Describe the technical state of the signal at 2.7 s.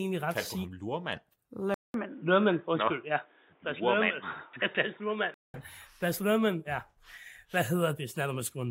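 At 2.7 s the speech sits inside a dull, boxy stretch from 1.74 to 5.54 s, most likely an input switched to a poorer device. Nothing passes above 3.8 kHz, and a faint new noise floor, roughly 40 dB down, rides underneath. A 200 ms gap marks the switch at 1.74 s. Unlike a simple low-pass filter, the tone colour and background change together, while the level stays about the same.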